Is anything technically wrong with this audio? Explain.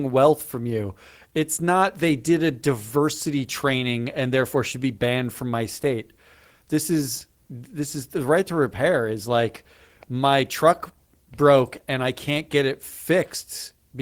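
No, nothing is technically wrong.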